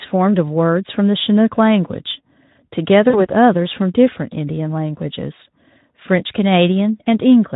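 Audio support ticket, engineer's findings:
VoIP packet loss concealed by the speech codec, 3.09–3.26 s. Speech smears into a buzzy tone or coloured noise that fades out, with no cut to silence. Decoder extrapolating last pitch and filter across a gap that fits about two 20 ms frames (40 ms), gain falling frame by frame. Speech stays weak or distorted past the gap while decoder state recovers. Distinct from a plain dropout or buffer underrun, which would give hard silence or a click. Speex at about 15 kbps contributes light coding roughness.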